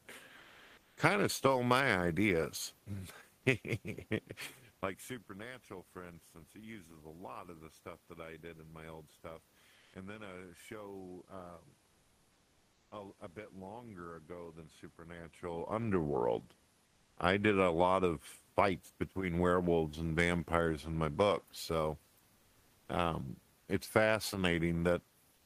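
At 0.37–0.97 s, 9.79–9.91 s, 16.87–17.17 s and 22.39–22.87 s the pauses carry comfort noise in place of the background, likely from Opus DTX: the room's detailed background becomes a steady, featureless hiss, shifting level by about 3 dB in the first two gaps.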